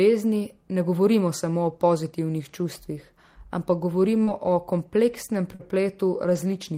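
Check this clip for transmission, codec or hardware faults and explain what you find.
There are two kinds of network damage in this speech, both bunched into the last couple of seconds.

First, short concealed packet loss, at 4.23 to 4.29 s and again at 5.55 to 5.61 s. Each time roughly 40 ms of audio didn't arrive in time, so the receiver improvised, stretching the last bit of sound forward (pitched if voiced, shaped noise if not) before blending back into real audio. You hear it as a quick smear or wobble, and a short consonant there can just disappear.

Second, lost packets rebuilt from error correction, each a single 20 ms frame, at 4.27, 4.47, 4.79, 5.13, 5.33, 5.59, 6.29 and 6.35 s. Here the next packet carried a low-bitrate backup copy of the missing one, the Opus in-band forward error correction trick, so the decoder played that instead of leaving a hole. No gap, but each rebuilt frame comes out a bit rougher and noisier than its neighbours, like a brief grainy patch in the sound.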